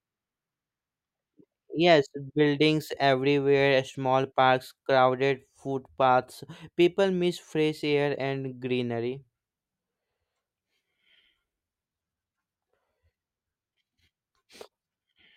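Speech recording with no technical faults to report.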